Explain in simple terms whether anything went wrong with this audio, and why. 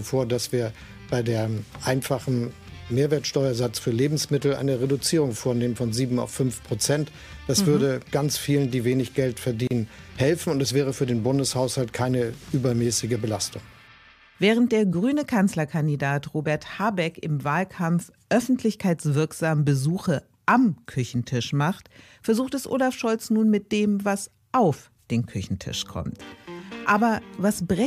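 At 9.67 seconds the sound briefly drops out, then resumes at 9.71 seconds. This is a gap at a join of encoded pieces. Two separately compressed sections were stuck together. Each kept its built-in padding silence, leaving a 35-millisecond hole with smeared edges.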